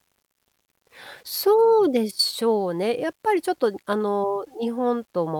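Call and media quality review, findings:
Grainy, gritty distortion across the whole speech clip, tracking the signal; quiet tails and low-level passages roughen and sputter rather than fading cleanly. Likely low bit depth without dither: rounded to around 9 bits, signal-correlated error roughly 40 dB below the speech.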